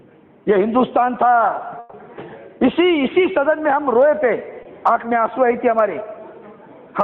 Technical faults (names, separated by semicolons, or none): burst of packet loss; short concealed packet loss